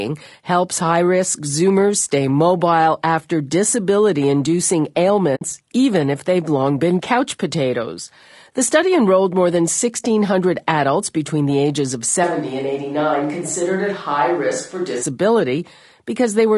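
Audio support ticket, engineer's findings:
Low-delay AAC compression, throughout. Speech rough and grainy, noise filling gaps between harmonics, top band thin and synthetic. Likely cause: AAC-ELD low-delay coding with short frames that resolve pitch harmonics poorly. Damage plainly audible; character fits a low bitrate around 32 kbps.

AAC frame loss with muting, 5.35 to 5.42 s, between "mobile after disability inducing" and "even if they've long". Soft-edged hole, roughly 60 ms of sound gone. Decoder zeroed the missing spectrum; overlapping windows fade out and back in. Gap length points to about three consecutive lost frames.

Switch to a distant microphone, 12.24 to 15.03 s, starting right after "between the ages of". Abrupt change to roomy, hollow sound with reduced bass. Level drops about 5 dB, and room noise rises to roughly 35 dB below the speech. Likely cause: close-mic signal dropped and recording fell back to a farther pickup such as a camera mic. 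Return to the close sound equally sudden.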